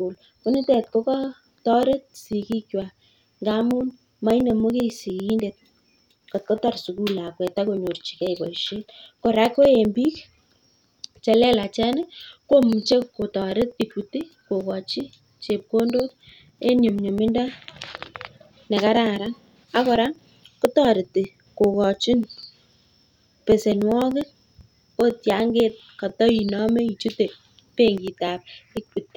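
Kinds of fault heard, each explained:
Periodic USB or driver dropouts: A background process stalls the USB link or audio driver at a fixed interval, and each time roughly a millisecond of audio is skipped outright, so the waveform jumps ahead rather than falling silent. Here the stalls repeat every 0.099 s, about ten per second, from 0.15 s to 29.07 s, heard as a steady train of small ticks riding on the speech and vanishing in the pauses.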